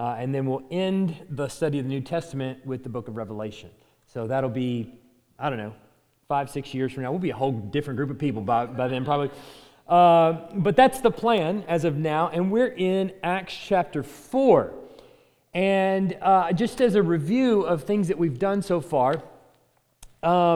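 At 11.38 s and 16.78 s, short sharp snaps of around -20 dBFS land on the sound. These electrical switching spikes likely come from nearby switch arcing.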